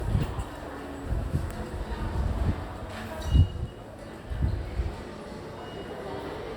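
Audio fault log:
Throughout, generation loss: swirly, smeared, hollow texture with blurred attacks, likely from roughly three rounds of Opus encoding at 64 kbit/s compounding quantisation noise.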